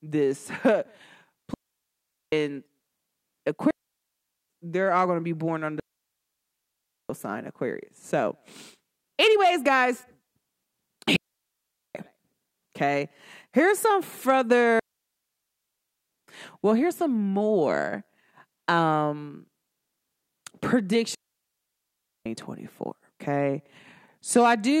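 Digital wireless dropouts occur at 1.54, 3.71, 5.80, 11.16, 14.79 and 21.15 s, lasting 0.79 to 1.3 s. Each time the receiver lost too much data and muted with a very short fade, leaving clean near-silent holes in the speech with no noise burst either side.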